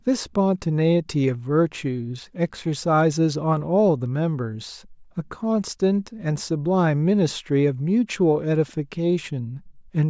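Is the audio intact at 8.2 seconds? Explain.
Yes, at 8.2 seconds the speech runs intact with no audible fault.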